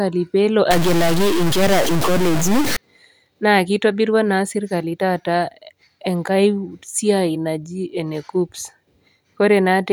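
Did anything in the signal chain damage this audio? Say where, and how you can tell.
Yes. From 0.71 to 2.77 s the speech turns harsh and buzzy, and pauses fill with noise. This is a stuck bit, likely at the converter or its data lines. Samples with that bit wrong jump by a fixed step of roughly -15 dBFS.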